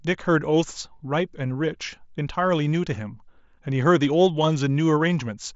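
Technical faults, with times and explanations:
No technical faults can be heard anywhere in this speech.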